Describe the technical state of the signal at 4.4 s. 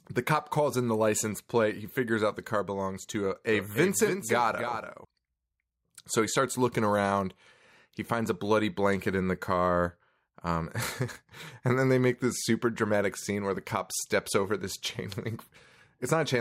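A doubled audio track runs from 3.53 to 5.05 s: the speech is heard twice, with a second full-band copy trailing roughly 300 ms behind at around 10 dB lower, dry and abruptly switched. A slower duplicate capture path is the likely cause.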